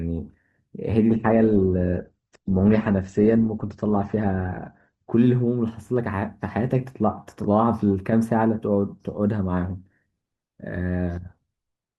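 From 1.1 s to 5.1 s the speech drops into an adaptive stream at a lower bitrate: the connection slowed, so the player switched to a leaner encoding. Treble vanishes above 8.1 kHz and artefacts thicken, consistent with a 16 kbit/s Opus rendition. Unlike a dropout, the change is abrupt yet gapless, and it reverses cleanly.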